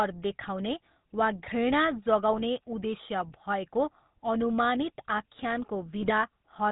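The speech runs through the GSM full-rate codec from start to finish. The codec rebuilds the voice from a vocal-tract filter driven by a sparse, regularly spaced pulse excitation, which fits the 13 kbps full-rate scheme, and it discards everything above 4 kHz. The damage is plainly audible: the voice sounds dull and band-limited, with a buzzy, gravelly roughness riding on every voiced sound.

GSM bit errors strike twice. From 2.33 to 2.42 s, corrupted filter, pitch and gain values reach the decoder for a few frames, pointing to a bit error rate of about 1.4 percent. Each bad frame gets a warped spectrum or a sudden jump in level, so the voice breaks into a short squawk and gargle. The same fault returns, slightly longer, from 5.98 to 6.11 s, spanning several frames and producing a burst of pops and garbled, distorted sound.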